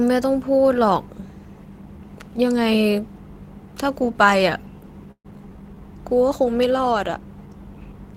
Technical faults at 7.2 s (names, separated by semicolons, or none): none